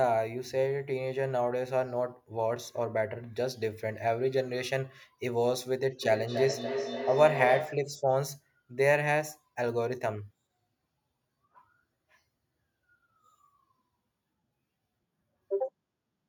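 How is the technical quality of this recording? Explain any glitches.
From 6.03 to 7.99 s the speech comes round again at roughly 300 ms intervals, each return thinner and ringing, peaking about 5 dB below the speech. This is feedback echo between two devices: one device plays the other's microphone signal, which is picked up again beyond either echo canceller's reach.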